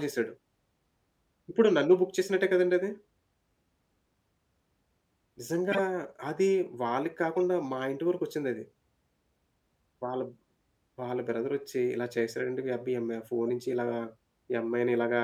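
Speech with three short bursts from corrupt frames being decoded: from 5.72 to 5.79 s, at 7.35 s, and from 13.48 to 13.50 s. In each, a compressed frame arrived with flipped bits and the decoder played it anyway, putting energy at the wrong frequencies. On a spectrogram each shows as a brief, sharp-edged vertical smear, and on a waveform as a spike. The first, spanning a few frames, is loud. The last two are faint.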